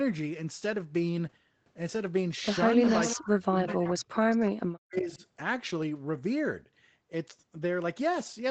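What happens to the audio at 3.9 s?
At 3.9 s two faults overlap. The speech level collapses, by roughly 35 dB at its deepest, in uneven stretches between 3.16 and 4.4 s, about a second of loss in all. This is speech suppressed in double talk, likely caused by an echo canceller that, with both sides talking at once, could not separate this talker from the loudspeaker's echo and turned both down. What sets it apart is that the talker's own sound is removed: gaps and dips, not an extra voice.

Inside that window, from 3.86 to 3.91 s, a faint delayed copy slips through, lagging the original by 358 ms and sitting about 20 dB below the speech. This is an echo leak, meaning the loudspeaker side's canceller likely failed to scrub its loudspeaker pickup from the microphone, and the remainder was sent back. Unlike the suppression, it adds sound, a brief late duplicate of earlier speech, rather than taking any away.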